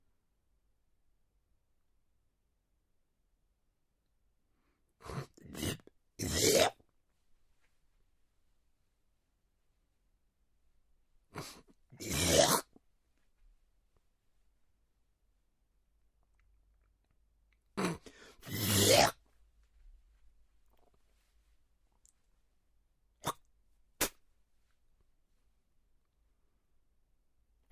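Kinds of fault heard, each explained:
No technical fault can be heard in this recording of sounds. Nothing in it calls for a fault to be listed.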